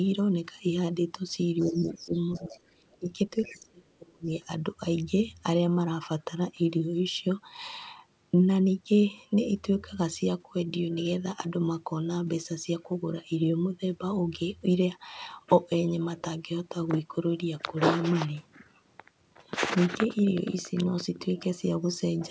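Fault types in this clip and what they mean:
Other side's voice leaking through: A second, fainter voice appears under the talker in short scraps at 1.59–1.94 s, 2.33–2.58 s, 2.92–2.98 s and 3.42–3.55 s. It is mostly about 20 dB below the main voice, with the 2.92 s scrap nearer 35 dB down. The likely cause is loudspeaker sound reaching the microphone and an echo canceller that left some of it in. Unlike the fault below, something is added rather than taken away.
Speech suppressed in double talk: The talker's own voice sinks and partly drops out while the other side is heard, at 1.61–2.17 s, 2.37–3.09 s and 3.37–4.29 s. The dips deepen from roughly 15 dB to around 30 dB, with about half a second or more affected each time. This fits an echo canceller that likely could not separate the talker from the returning echo and turned everything down. What tells it apart from leakage is that the main voice loses level, rather than a foreign voice appearing.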